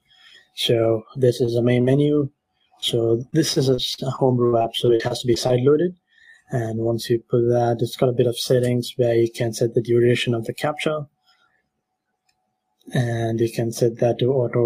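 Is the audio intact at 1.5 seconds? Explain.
No. A short concealed packet loss at 1.45–1.49 s left about 20 ms missing; the decoder extrapolated the preceding sound across the gap, producing a brief smear.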